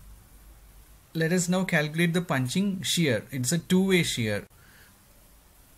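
Listening through the recording, nothing stood out as a technical fault at any point.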